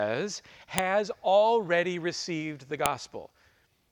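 At 0.78 s and 2.86 s, sharp clicks mark a file header played as audio: header bytes at each joined piece's start, snapping regardless of the speech, unlike signal-dependent clipping.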